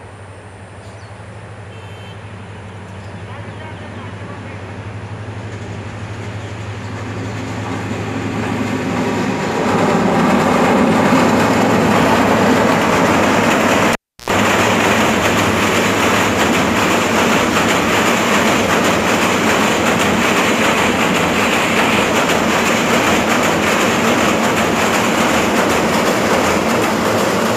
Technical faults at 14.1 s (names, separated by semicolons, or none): cable pulled and plugged in